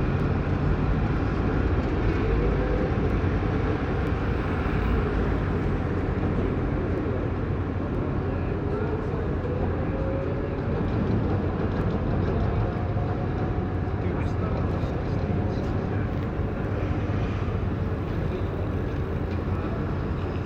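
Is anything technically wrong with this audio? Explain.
Yes. Clock drift buffer slips run from 0.20 s to 19.55 s: a click roughly every 0.97 s, about twenty in all. The likely cause is two devices on independent clocks differing by around 200 ppm, so the buffer periodically drops or repeats a few samples.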